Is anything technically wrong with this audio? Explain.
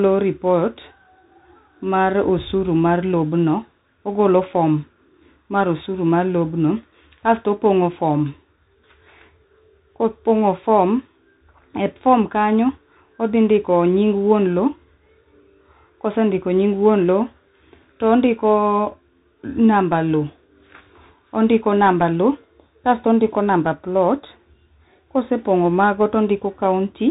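Yes. Throughout the speech, the audio carries the Bluetooth CVSD headset codec. CVSD encodes each sample as a single up-or-down bit with an adaptive step size, which points to a 64 kbps link. Nothing above 3.8 kHz survives, so the speech sounds narrow and muffled. The damage is plainly audible: loud high-frequency sounds outrun the step and distort, s sounds come out scratchy, and a granular hiss sits under the speech.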